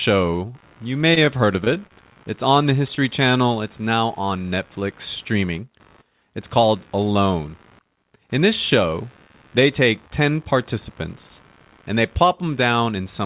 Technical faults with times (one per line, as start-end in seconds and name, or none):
0.00-13.25 computer activity noise
1.14-2.17 repeated packet loss (robotic sound)
2.95-2.99 short concealed packet loss